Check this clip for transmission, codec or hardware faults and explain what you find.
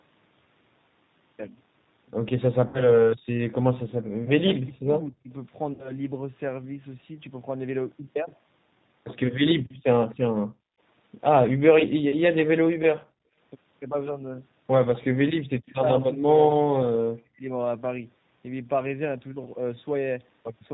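Five kinds of fault are audible in this speech: codec coloration throughout, two concealed dropouts, suppression during double talk, gating of the background, and a brief echo.

G.729 codec, throughout: the speech sounds rough, slightly synthetic and band-limited. The 8 kbit/s codec rebuilds it from a filter, pitch predictor and sparse pulses, discarding everything above 4 kHz.

VoIP packet loss concealed by the speech codec, 2.68–3.03 s and 5.73–5.98 s: the sound turns buzzy and fades, then stays weak briefly. About 60 ms went missing each time, which fits two lost packets, and the decoder stretched its last frame to fill the gap.

Speech suppressed in double talk, 4.2–5.3 s: the voice dips hard, by around 40 dB at its deepest, for roughly 0.7 s in total. The likely cause is an echo canceller ducking both talkers while they overlapped.

Background gated by the echo canceller, 9.57–15.47 s: the room sound drops away, by about 35 dB at worst, for around a second in total. 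The canceller clamped the microphone while the loudspeaker played.

Echo leak, 16.01–16.05 s: a faint delayed copy of the voice, 242 ms late and roughly 25 dB below the speech. This is likely residual loudspeaker echo that the far end's canceller failed to remove.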